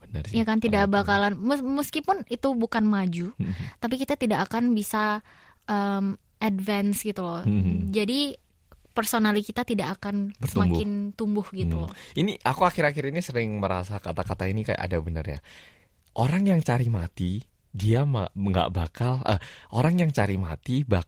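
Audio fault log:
No faults are heard in this speech clip. The Opus voice compression leaves only light coding marks, with the full band kept and the sound consistent with its hybrid mode at a rate around 20 kbps.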